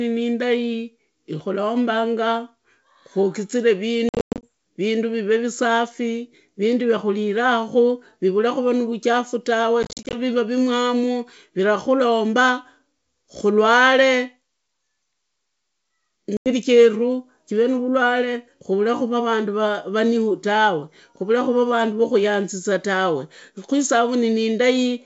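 Packet loss on an ADPCM call hits at 4.09–4.44 s, 9.83–10.16 s and 16.37–16.53 s. Speech drops to hard-edged silence, then returns slightly distorted while the decoder's predictor resynchronises.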